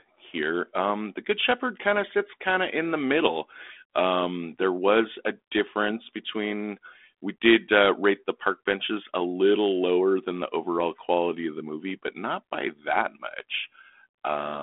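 No technical faults are audible.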